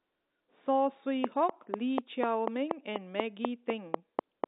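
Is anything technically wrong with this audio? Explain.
Yes. From 1.24 s to 4.45 s a train of clicks runs over the speech, heard through the narrow telephone band of roughly 250 Hz to 3.7 kHz. The clicks are alike in shape and evenly spaced at about 4.1 per second, around fifteen in all, peaking about 20 dB above the speech. The cause is likely an external pulse source, such as nearby equipment interference or a faulty interface, injecting the same transient repeatedly. The result is a steady ticking that persists through pauses as well as speech.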